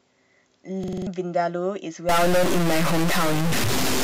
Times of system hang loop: 0.84-1.07

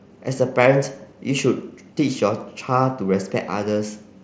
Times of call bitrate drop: none

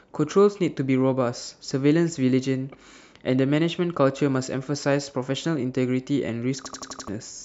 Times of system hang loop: 6.66-7.08

